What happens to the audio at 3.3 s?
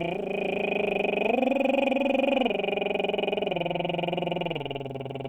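At 3.3 s the music plays through intact, with no dropout, click, distortion or other fault at that moment.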